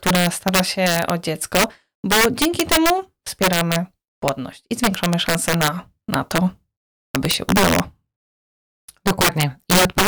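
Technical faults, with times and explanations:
Throughout, integer overflow: the speech is pushed about 8 dB past full scale, and on the loudest peaks, a small share of samples, the value wraps to the opposite extreme instead of flattening, so each peak gives a violent crack far harsher than the flattened buzz of clipping.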